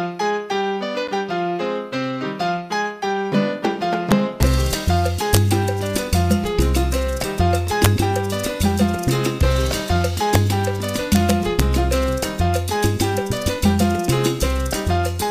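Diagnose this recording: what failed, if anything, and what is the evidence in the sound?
Integer overflow in a fixed-point gain or format-conversion stage: peaks only about 1 to 2 dB over full scale wrap to the opposite sign, giving violent cracks at 4.12–4.43 s, 5.34–5.37 s, 7.85 s, 10.35 s and 11.13–11.60 s. The waveform shows peaks jumping rail to rail; the spectrogram shows broadband vertical streaks.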